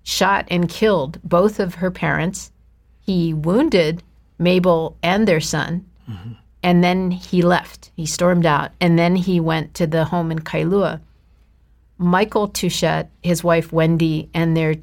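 Listening to this speech recording, nothing technical stood out as a problem at any point.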